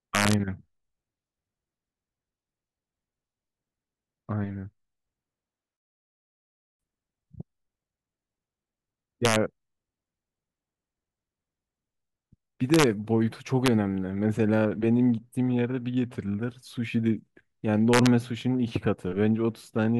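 Integer overflow cracks through the speech at 0.15–0.33, 9.25–9.36, 12.74–12.84, 13.66 and 17.93–18.07 s. Loud peaks push about 1–4 dB past the integer limit and wrap to the opposite sign instead of being held there, so you get harsh snapping bursts far nastier than clipping.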